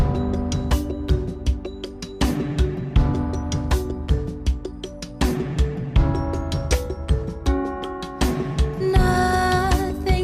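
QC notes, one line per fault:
No faults heard anywhere in the clip.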